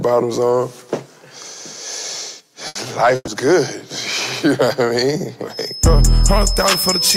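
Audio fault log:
2.67–2.78 s and 3.15–3.30 s, burst of packet loss: the receiver stretches the last sound over 80 ms, then 120 ms with a short silent tail, and skips ahead past the lost audio.
5.47 s to the end, feedback whistle: a thin steady 5.2 kHz tone wavers along only a little below the sound, likely a speaker-to-mic loop sitting right at the feedback point.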